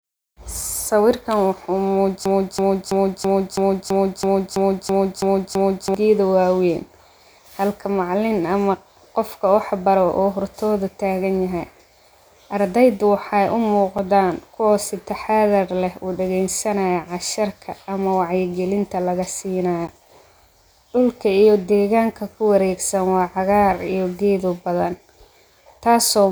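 From 2.26 to 5.94 s the speech falls into a broken-record loop. A 330 ms fragment repeats exactly, 11 times, likely because playback stalled, and the intervening audio is lost.

Blocks of digital silence cut in at 13.98 s (5.8 ms) and 19.87 s (11.6 ms), heard as clicks. Their lengths fit unfilled 256- and 512-sample output buffers.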